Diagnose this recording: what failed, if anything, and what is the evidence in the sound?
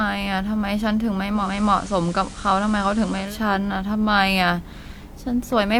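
The failure is at reception: the hybrid radio went from digital radio blending to analogue FM at 1.31 s and returned at 3.39 s, with each cross-fade taking about 0.24 s. During that stretch a steady hiss sits roughly 20 dB under the speech. The level does not change. A codec dropping to a lower bandwidth would narrow the top end without adding broadband hiss. The gradual fade in and out points to a receiver switching sources, not a hard dropout.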